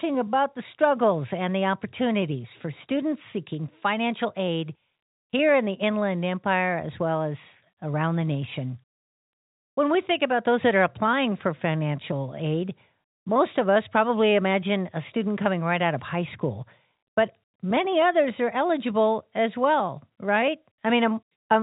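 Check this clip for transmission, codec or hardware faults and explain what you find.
No faults found: the speech sits inside a telephone band consistent with G.711 coding, with nothing above 4 kHz and at most a faint quantisation hiss that follows the speech level.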